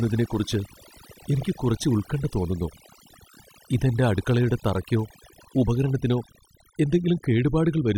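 Overdone noise removal runs through the whole recording. The noise reduction was set far too strong. It cuts individual frequency bands whenever they sit near its noise estimate, taking quiet parts of the speech too. Pauses drop with twinkling specks.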